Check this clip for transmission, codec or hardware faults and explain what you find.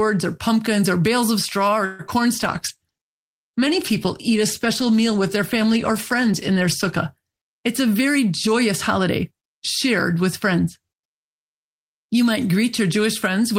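Four faults are audible: a stall, a brief concealed dropout, a stretch of reduced bitrate and a hurried passage.

Call audio freeze, 1.85 to 2.01 s, right after "bales of straw or": the last sound is held on as a fading buzz for about 137 ms, likely because delayed packets drained the jitter buffer. Nothing is lost; speech resumes where it stopped. That distinguishes it from packet loss, which drops audio.

Short concealed packet loss, 2.07 to 2.10 s: about 20 ms of audio never arrived and was papered over by extending the preceding sound before blending back. It is a quick smear rather than a pause. It is far shorter than the freeze, and here the audio is actually missing.

Call bitrate drop, 2.34 to 7.16 s: the encoder fell from 32 to 16 kbps for most of that span after the bandwidth estimate dropped. Speech turns rough and duller, with less top end. Unlike concealment, this is a sustained change in quality rather than a momentary glitch.

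Jitter buffer speed-up, 7.48 to 9.48 s, ending before "shared with friends": the receiver trimmed tiny pitch-period slices to shed built-up delay, removing around 150 ms in total. Speech runs about 7% fast at unchanged pitch. The pitch staying put rules out simple resampling.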